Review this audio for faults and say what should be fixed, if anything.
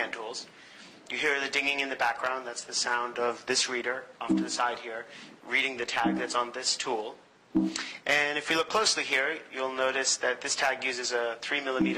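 No faults turn up in this audio, so nothing needs to be fixed.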